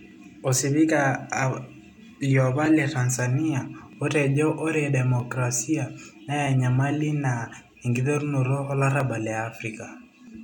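Two clocks likely drifting about 500 ppm apart cause clock drift buffer slips: from 0.11 to 10.27 s, a click recurs every 1.27 s.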